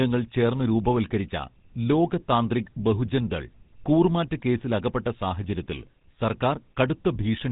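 From the first moment to the end, the speech has been through a GSM full-rate codec, and the damage is plainly audible. That codec rebuilds the voice from a vocal-tract model driven by a sparse, regularly spaced pulse train, so you get that gravelly, buzzy texture instead of a natural voice. Everything above 3.8 kHz is gone, which gives it the boxed-in phone sound, and the overall character fits the old 13 kbps GSM rate.

Underneath that, also for the whole clip, there's a faint sample clock jitter. The converter's clock wobbles by well under a microsecond, so each sample lands a touch early or late, and the error tracks how steep the waveform is. You hear it as a very low hiss or grain, way down below the signal, that creeps up on louder, brighter moments of the speech and disappears in the gaps between them.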